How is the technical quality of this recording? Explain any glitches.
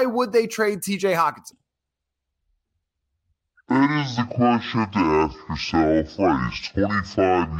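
From 1.52 s to the end, the speech becomes deep and dragging: a section at the wrong speed, running at 0.567 times normal and dropping about ten semitones, likely from playback on a mismatched clock.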